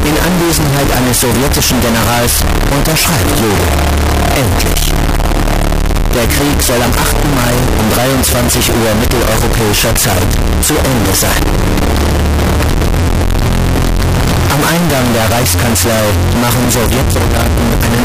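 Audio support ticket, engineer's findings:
Float read as integer, whole clip. Symptom: extremely loud, harsh, near-square waveform sitting at an almost fixed, high level; background noise as loud as foreground, yet pitch remains traceable. Likely cause: 32-bit float samples decoded as 32-bit integer, so sign and exponent bits set level. Distinct from clipping or overdrive: quiet passages are not quieter, and level doesn't track the source at all.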